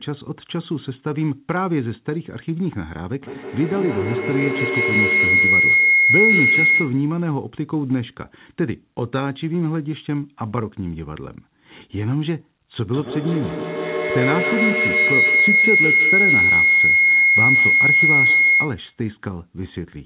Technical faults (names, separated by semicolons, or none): feedback howl